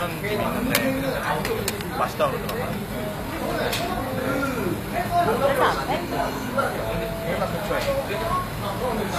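Throughout, nothing sounds above about 14.9 kHz, and the top end is dull. This is likely low-bitrate audio saved at a high bitrate, and the later encode cannot restore what the first one removed.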